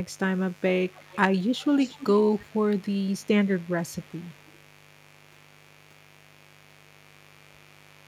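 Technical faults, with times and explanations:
Throughout, mains buzz: a dimmer, rectifier or poorly shielded lead is injecting sharp switching spikes into the signal path twice per cycle of the 50 Hz supply. Because those spikes are so abrupt, they carry a dense stack of harmonics of 50 Hz stretching up into the kilohertz range, which is why the result is a raspy, steady buzz rather than a smooth hum. It sits about 30 dB below the speech and runs unbroken under every pause.
0.88–1.19 s, 1.47–2.07 s, 2.3–2.6 s, 3.55–4.61 s and 5.4–5.46 s, echo leak: the far end's echo canceller is likely failing to remove everything its microphone hears from its loudspeaker, so that residue is sent back down the line. Each time, a faint delayed copy of the speech trails the original by 250 ms. It is loudest in the 1.47–2.07 s stretch, still well below the main speech. It is weaker in the other passages and barely audible at 5.4 s.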